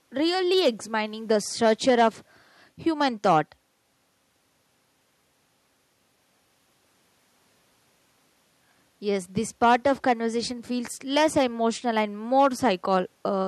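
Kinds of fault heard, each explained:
No technical faults can be heard anywhere in this speech recording.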